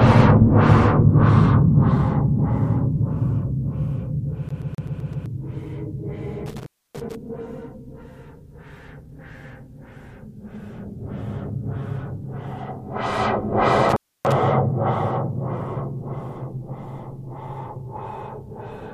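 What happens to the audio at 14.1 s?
An intermittent contact fault spans 13.89 to 14.32 s. A loose plug or cable briefly loses connection, and the signal drops out for about 286 ms, with crackle as the contact breaks and remakes. Faint hiss remains during the gap. On a waveform the trace collapses to a thin noise band bracketed by jagged spikes. A spectrogram shows a near-empty gap edged by vertical broadband streaks.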